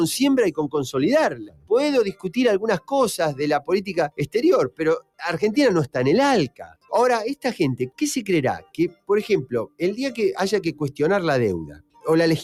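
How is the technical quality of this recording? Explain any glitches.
The recording is compromised by a speech-oriented noise suppressor working on material it wasn't designed for.

Throughout, a noise suppressor applied to music or sounds treats sustained and ambient content as noise, so level swings by roughly 10 dB. Attacks pass while held tones and tails sink, giving a fluttering, pumping thinness. Unlike compressor pumping, the swings follow steadiness, not loudness.

Sound cut by the noise suppressor occurs at 1.3–1.71 s (about 17 dB down), 2.12–2.32 s (about 15 dB), 4.09–4.36 s (about 19 dB), 5.0–5.21 s (about 21 dB), 6.49–6.92 s, 8.59–9.09 s and 11.69–12.05 s (each about 20 dB). Here steady passages were judged noise and pulled down. Unlike a dropout, the sound sinks rather than vanishing.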